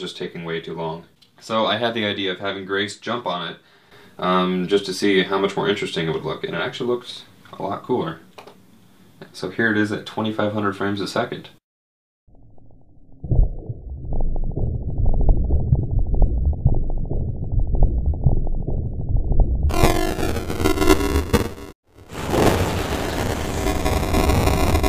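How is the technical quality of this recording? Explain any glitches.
The recording has one clear fault, buffer tearing, from 19.69 s to the end. Playback and the audio hardware fall out of step, so each buffer period mixes current sound with audio from about 10 ms earlier, roughly a third old, spliced with hard joins. The result is a robotic buzz near 345 Hz, which fits a 128-sample buffer, audible only while sound is present. A spectrogram shows evenly spaced harmonic lines at multiples of 345 Hz, and the waveform shows small regular discontinuities every few milliseconds.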